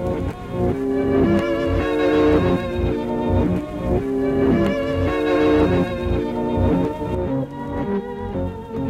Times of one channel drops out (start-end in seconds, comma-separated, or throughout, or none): 7.15-8.89